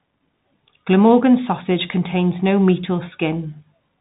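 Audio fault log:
Throughout, Bluetooth CVSD headset codec: the speech is cut off above about 3.8 kHz, and the damage is plain. The codec sends one bit per sample saying only up or down, with an adapting step, which fits a 64 kbit/s CVSD stream. Loud, fast-rising sounds outrun the step and distort, s sounds turn scratchy, and a granular hiss sits under the speech. That grain and slope distortion set it apart from a simple low-pass filter or a cleaner narrowband link.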